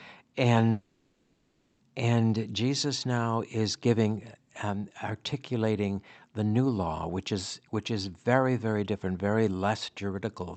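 From 0.71 s to 1.81 s the speech gives way to a fading buzz that tails into about a tenth of a second of silence before the talker returns with material missing. This is likely a long network dropout: roughly 1.1 s of audio never arrived, and the receiver stretched the last sound to cover the gap.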